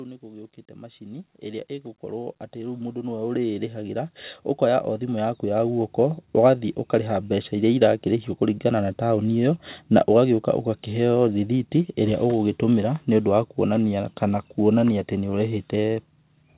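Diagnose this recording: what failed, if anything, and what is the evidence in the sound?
Automatic gain rising at 2.0 to 4.06 s and again at 4.6 to 5.93 s, in the call-processing stage: the gain control judged the speech too quiet and ramped up by about 9 dB, then about 5 dB, so voice and background swell together over the call path's band, which stops at 4 kHz.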